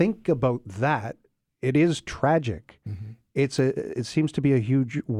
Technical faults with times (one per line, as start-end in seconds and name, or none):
3.58-4.51 CD scratch ticks